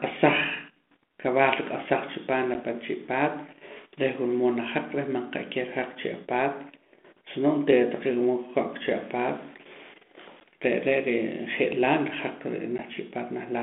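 Short, hard-edged dropouts of about 10 ms hit the speech at 2.54 s, 10.4 s and 12.78 to 12.82 s, each followed by briefly distorted speech. This is packet loss on an ADPCM call. A single lost packet was replaced by silence each time, leaving the decoder's adaptive predictor and step size out of step with the sender's until they settled again. The line band runs from 200 Hz to 3.5 kHz, and its light coding grain fits G.726 at 32 kbit/s.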